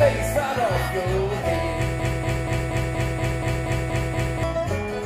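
From about 2.00 s to 4.43 s the sound gets stuck in a broken-record loop: a 238 ms fragment plays back to back ten times, identically, and whatever should have come through in that stretch is simply gone. Most likely the player or stream stalled and kept resending its last buffer.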